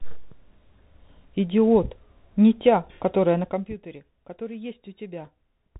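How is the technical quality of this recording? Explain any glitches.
Quality is limited by one fault that runs through the whole clip. It is the Bluetooth CVSD headset codec. This narrowband link sends one bit per sample, saying only up or down, with an adapting step size. The sound fits a 64 kbps stream. Nothing above 4 kHz survives, so the speech sounds thin and muffled. Loud high sounds outrun the step and distort. S sounds turn scratchy. A granular hiss sits underneath. The gradual level changes come through smoothly.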